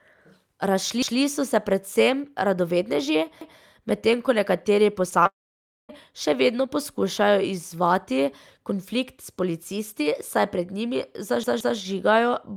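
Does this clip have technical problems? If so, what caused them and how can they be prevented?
Yes. At 1.02 s, 3.41 s (just before "medtem ko nekateri") and 11.44 s, a stutter replays a 0.17 s slice, which fits an 8192-sample buffer. This is repeated buffer: the device replays stale audio when new data arrives late. The last one, at 11.44 s, repeats twice, lasting 0.34 s. A larger buffer or higher processing priority prevents it.

At 5.10 s and 5.23 s, after "medtem ko nekateri", there are brief smears of about 20 ms. This is short concealed packet loss: the receiver extended the last sound to cover missing packets. A jitter buffer with forward error correction prevents it.

From 5.27 to 5.91 s the sound buzzes briefly, then goes silent for about 0.56 s, and part of the audio never returns. The likely cause is a long network dropout. A more stable connection prevents it.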